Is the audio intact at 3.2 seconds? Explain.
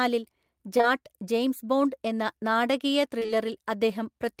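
No, right after "ജെയിംസ് ബോണ്ട് എന്ന നാടകീയ" there's short concealed packet loss from 3.19 to 3.30 s: three back-to-back 20 ms gaps the receiver papered over by extending the preceding sound, then blending back, so you hear a brief smeared wobble.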